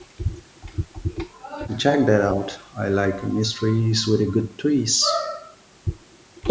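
Speech runs the whole clip under low bit depth with noise shaping: roughly 8-bit rounding, with the error pushed upward, giving a steady thin hiss nearly as loud as the voice and climbing toward the 8 kHz top of the call band. That upward tilt separates it from flat, unshaped quantisation noise.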